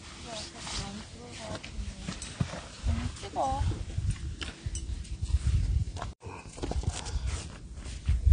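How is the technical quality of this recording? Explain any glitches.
The quality is poor. Throughout, the sound is dull and smeared, with nothing above 9.7 kHz and a warbling, fizzy texture on sustained parts. The likely cause is AAC compression (AAC-LC) at a low bitrate, consistent with about 32 kbps. The encoder drops high frequencies and coarsely quantises what remains, leaving spectral holes that smear detail and make steady sounds shimmer unnaturally.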